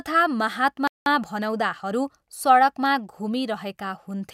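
At 0.88 s the speech cuts off mid-flow and the output falls completely silent for about 190 ms, until 1.06 s. This is a playback stall, most likely the player running short of buffered data or its output thread being held up, so nothing reached the output until it recovered. On a waveform it shows as a flat line; on a spectrogram, a clean vertical gap of empty columns across every frequency.

From 1.06 s to 2.30 s the speech comes back hurried, running at about 1.15 times normal speed while keeping its ordinary pitch. This is time-compressed catch-up: to work off the backlog left by the stall, the player drops short slices and cross-fades the pieces either side. On a spectrogram the harmonics stay at the same heights but syllables sit closer together. The waveform shows tighter envelopes with small seams where slices were joined.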